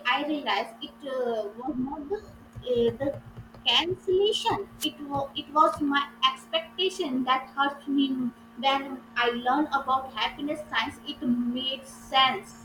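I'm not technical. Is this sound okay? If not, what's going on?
No, there's a wireless microphone noise hit from 4.78 to 4.89 seconds. The radio signal dips briefly, causing a quick swish of static just before "was it".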